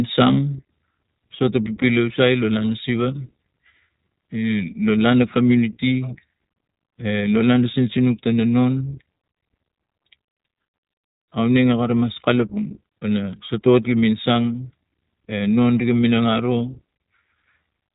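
From start to finish the speech has passed through the iLBC codec, which fits a 20 ms frame mode at around 15 kbps. Each frame's excitation is coded on its own, without drawing on the frame before, and the band is cut off near 3.8 kHz. The result is plainly audible: the speech sounds narrow and boxy, with no air or sibilant sparkle, and carries a rough, slightly synthetic graininess throughout.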